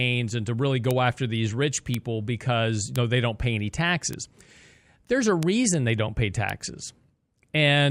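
Speech with bit error spikes: sharp, broadband ticks at 0.91 s (after "and to really"), 1.94, 2.96, 4.13, 5.43 and 6.50 s. Each one sounds like a flipped bit in one to three samples, peaking near about -4 to -10 dBFS.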